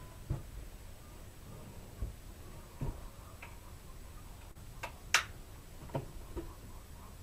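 At 4.51 to 4.57 s, about 40 ms of audio failed to reach the decoder in time, a short concealed packet loss. The receiver bridged the gap by extending the preceding sound for 37 ms, then blended back, leaving a brief smear or wobble.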